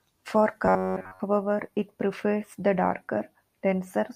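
From 0.65 to 1.20 s, robotic sound from repeated short buffers: a metallic 93.8 Hz buzz, likely from looping 11 ms chunks, drawing flat, evenly spaced spectrogram harmonics.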